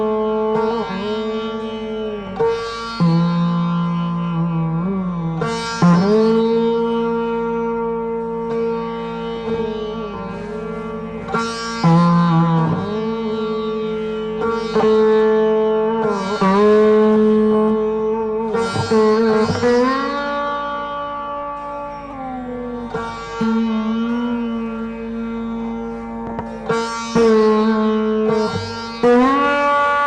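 No faults can be heard anywhere in this recording.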